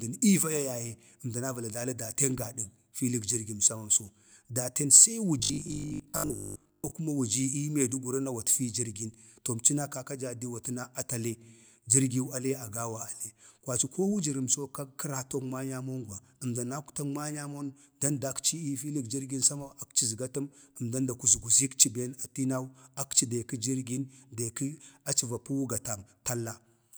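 Speech clip with robotic sound from repeated short buffers at 5.40–6.92 s: a rigid 50 Hz buzz, likely from the same 20 ms block replaying over most of that stretch.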